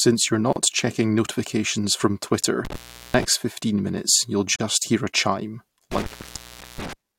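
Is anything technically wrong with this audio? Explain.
Yes, the speech has two kinds of fault. Gaps at joins of encoded pieces occur at 0.53 to 0.56 s (about 32 ms) and 4.56 to 4.60 s (about 40 ms), between "fifteen minutes you'll" and "hear a chime", four seconds apart. Separately encoded segments were butted together with their encoder start delay and final-frame padding left in, so brief silences with smeared edges break the flow before the speech resumes where it stopped.

Intermittent contact occurs at 2.65 to 3.25 s, after "checking notifications from twitter" and before "fifteen minutes you'll", with the line open for about 390 ms. It occurs again at 5.92 to 6.93 s, after "hear a chime", open for about 720 ms. A loose connection briefly breaks the signal path, so the speech drops out with crackle at the edges, leaving faint hiss.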